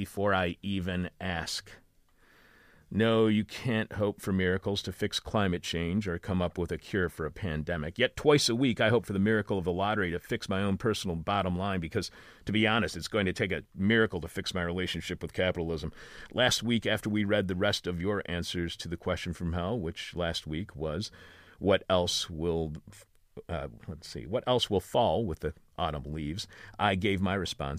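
A speech recording with nothing technically wrong to point to anywhere along its run, so there's no fault here to time or trace back to a cause.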